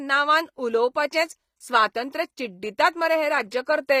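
From start to finish the speech carries plainly audible HE-AAC compression artefacts, likely from a low-rate encode around 24 kbps. The treble is synthesised from lower bands rather than coded, so its harmonics misalign above the crossover and s sounds come out gritty and lispy.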